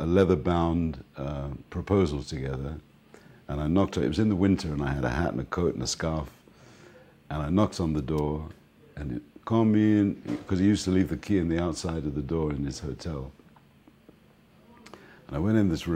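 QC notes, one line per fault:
8.18 s, electrical switching spike: a nearby switch, motor or static discharge likely arced and coupled onto the audio line, adding a brief transient. It is heard as a sharp snap peaking at about -25 dBFS, sitting on top of the sound.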